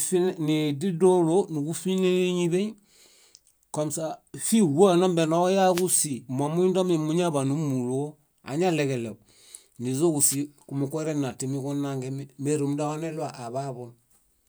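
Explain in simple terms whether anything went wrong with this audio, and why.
Two wireless microphone noise hits interrupt the speech, from 5.69 to 5.89 s and from 10.29 to 10.36 s. Each is a brief swish of static. The radio link from the microphone briefly faded, so receiver hiss rose for a fraction of a second.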